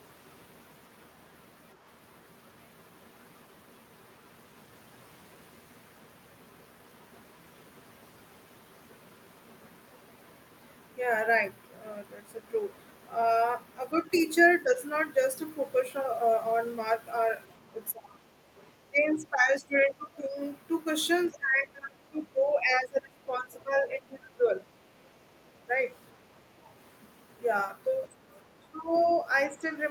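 The speech starts getting pushed down around 14.64 to 14.74 s, just a slight dip of about 5 dB. It comes back harder at 17.75 to 18.2 s, with a drop of about 15 dB, then 18.9 to 20.38 s at about 10 dB. The longest stretch, 21.28 to 24.54 s, sinks by about 25 dB. This is speech suppressed in double talk, likely from the echo canceller confusing the talker with far-end audio while both sides spoke, so it ducked everything. There's another drop of about 20 dB at 28.59 to 29.08 s and a small one of about 5 dB at 29.49 to 29.66 s.

Near the end, the other side's voice leaks through, probably from the loudspeaker reaching the mic with leftovers the canceller likely didn't scrub out. The first scrap, at 28.32 to 28.36 s, is very faint, sitting far below the speech. A clearly stronger bit follows at 28.94 to 29.16 s, still well under the talker, about 25 dB down. It overlaps the suppression dip there, so you get the talker sinking while a trace of the far end pokes in.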